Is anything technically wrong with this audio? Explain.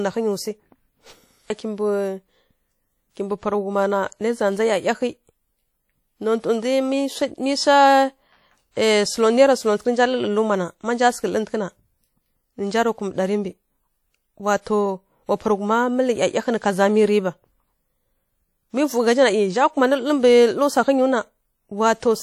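Yes. Throughout the speech there is a ringing, washy quality, with a hiss that swells and fades with the signal. This is likely WMA compression: long transform blocks smear quantisation noise over tens of milliseconds, and the audible damage fits a bitrate around 48 kbps.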